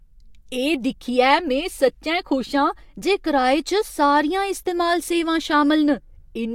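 No technical faults are audible anywhere in the recording.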